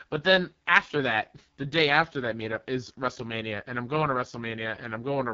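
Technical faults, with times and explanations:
Throughout, AMR wideband (HD Voice) codec: the speech comes out rough and raspy, with nothing above 7.5 kHz. That heavy damage fits the lowest 6.6 kbit/s mode, where the pulse-driven vocal model gets too few bits and the top band is just shaped noise.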